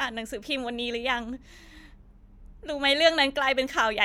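No technical fault can be heard anywhere in the speech. Nothing in the recording calls for comment.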